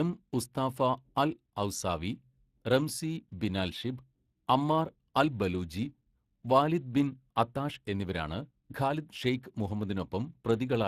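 From the first second to the end, the speech carries Speex codec damage that is plainly audible: a grainy, hoarse roughness where the CELP excitation is starved of bits, consistent with a setting of roughly 22 kbps. Nothing is heard above 15.4 kHz. Unlike transform codecs such as MP3, which smear into swirly, watery warbling, this damage stays rasping and hoarse on the speech itself, the signature of a speech-model codec.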